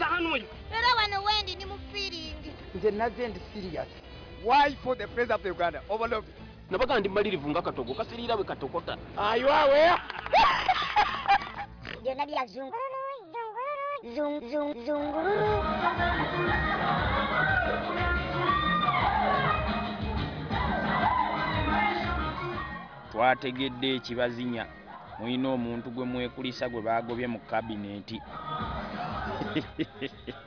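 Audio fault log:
No faults heard at any point in the audio.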